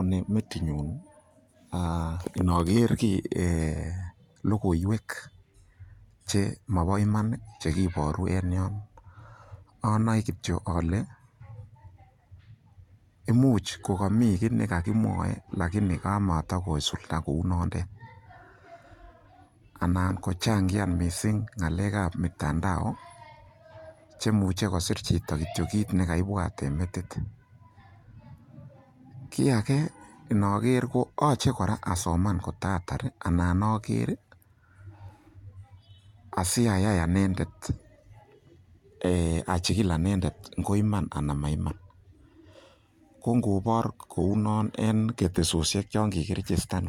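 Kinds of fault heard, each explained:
No kinds of fault are heard in this speech clip.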